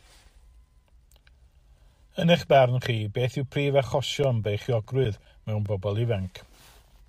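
A speech recording carrying a short run of CD scratch ticks between 4.03 and 5.66 s: nine evenly spaced clicks, about five or six a second, the longest around 10 ms. Each marks one revolution where a blemish wiped out more data than error correction could restore, so the player patched or muted those samples. On a spectrogram they show as thin, regularly spaced vertical broadband lines; the waveform shows matching brief notches or spikes.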